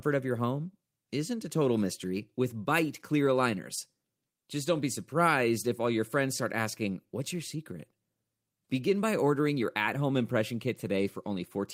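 No technical faults are audible at any point in this speech recording, and the signal stays steady and continuous throughout.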